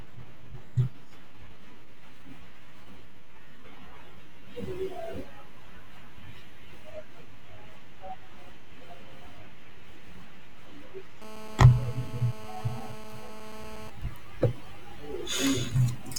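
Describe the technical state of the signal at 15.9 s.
At 15.9 s the speech is sitting on a DC offset, and it's there for the whole clip, not just this moment. The entire waveform is pushed off the zero line by a constant amount, about -34 dBFS. You can't really hear it as such, but it eats a bit of headroom on one side and shows up as a steady lump of energy right at the bottom of the spectrum.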